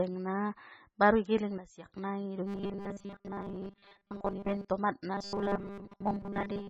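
MP3 compression runs through the whole clip, heavy and likely from a very low bitrate near 16 kbps. The sparse coding leaves a watery, swirly texture on the speech.

A sudden gain jump from 1.58 to 1.86 s drops speech and background together by about 12 dB, likely a level change applied without any ramp.

Robotic sound from repeated short buffers appears from 2.46 to 4.70 s and again from 5.13 s to the end. A rigid 200 Hz buzz runs through the voice, which fits a 5 ms buffer being repeated while most of the real audio is skipped. That is likely from audio arriving too seldom.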